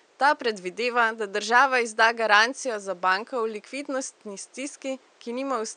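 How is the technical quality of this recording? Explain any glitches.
No glitches to explain here, just a faint bit of room noise sitting about 37 dB under the speech, which is simply part of the space it was recorded in.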